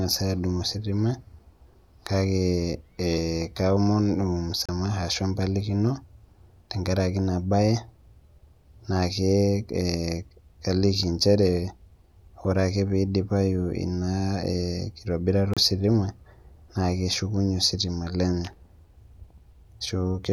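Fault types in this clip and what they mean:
Digital broadcast dropout: the receiver stopped getting usable frames, through lost signal or failed checksums, and muted until valid data returned, so the speech carried in that gap is gone. It happens twice, at 4.66–4.69 s and 15.54–15.57 s, each hole about 32 ms long, which fits a single lost frame. On a waveform each shows as a flat silent gap. On a spectrogram it is a thin vertical blank strip across all frequencies.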